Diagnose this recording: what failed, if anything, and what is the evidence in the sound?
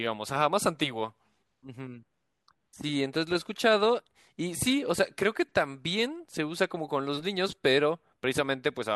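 No fault detected in this recording.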